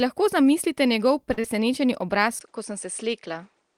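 A short stall from a late packet comes first in this speech clip, from 1.33 to 1.38 s, right after "lahko zamislite njegov": a packet missed its playout deadline, the jitter buffer emptied, and the receiver held the last sound for about 40 ms until the data turned up. Playback then resumed from the same point, so nothing is lost, but that sound is drawn out and everything after it runs about 40 ms later. Close behind, from 1.40 to 1.45 s and still just after "lahko zamislite njegov", comes a short concealed packet loss. Roughly 30 ms of audio never reached the decoder in time, and the receiver papered over the gap with about 31 ms of synthesized continuation before blending back into real signal. The result is a brief smear or wobble, and any short consonant in that window may be gone. From 2.39 s to the end the sound changes character, most likely because the input switched to a poorer device. 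A gap of about 20 ms marks the changeover. Afterwards nothing is left above 9.8 kHz, so the sound turns duller, the level falls by about 5 dB, and a new background noise appears, sitting roughly 45 dB below the signal.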